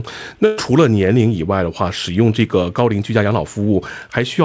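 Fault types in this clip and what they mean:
Burst of packet loss: From 0.46 to 0.59 s, about 120 ms of audio never arrived in time. The receiver stretched the last sound to cover the gap, fading it down. The sound then resumes further on, with that stretch missing.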